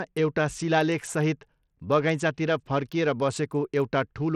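From start to end, the speech carries plainly audible Bluetooth SBC compression damage, likely from a low-rate SBC link. The top end flickers and drops in and out. A gritty, grainy noise clings to the sound. Aliasing rides on the sound as well. This happens when the codec splits the signal into a few wide frequency bands and has too few bits to share. The weak upper bands get starved. The rest are coarsely quantised. The starvation fits a bitrate near 80 kbps.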